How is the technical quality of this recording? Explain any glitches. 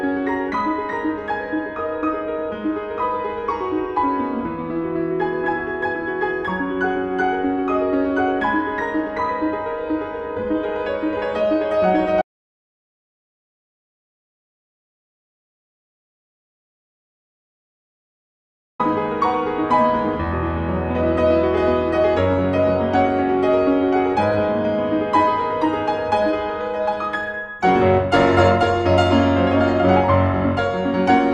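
The recording has one clear fault, a long gap in the middle.

Audio dropout to silence, from 12.22 s to 18.80 s: the sound cuts off abruptly and returns just as suddenly, leaving about 6.6 s of silence with no room tone or background noise. The input was likely lost upstream, through a disconnected source, a failed link or an accidental mute, while the recorder kept writing silence. Whatever occurred during those 6.6 seconds is unrecoverable.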